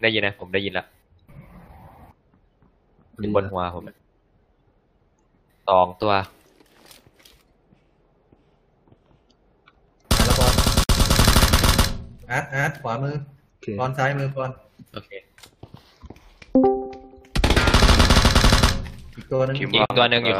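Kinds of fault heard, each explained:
Gap at a join of encoded pieces: separately encoded sections were joined untrimmed, leaving encoder start delay and last-frame padding as silence. Dropouts with smeared edges of 55 ms at 10.84 s and 45 ms at 19.86 s interrupt the sound, which resumes where it stopped.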